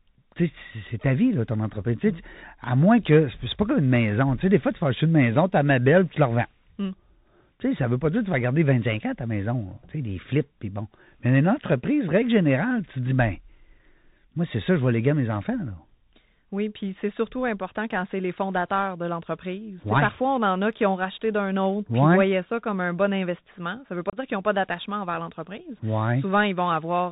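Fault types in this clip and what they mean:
Bluetooth CVSD headset codec: The speech runs through the narrowband headset codec for its whole length, which fits a 64 kbps CVSD link. The coder sends one up-or-down bit per sample and adapts its step size, so nothing above 4 kHz survives. Loud, bright passages outrun the step and distort, sibilants come out scratchy, and a grainy hiss sits beneath the speech. The damage is plainly audible from start to finish.
Unconcealed Bluetooth headset packet loss: A few voice packets between headset and phone went missing at about 24.10 to 24.17 s, right after "ne veut pas" and before "qu'ils n'ont pas d'attachement". Roughly 30 ms of speech drops out, with nothing filled in, only silence or an idle pattern. The hole has hard edges that can click, and the CVSD decoder's step size has to rebuild afterwards, so the speech resumes briefly quieter.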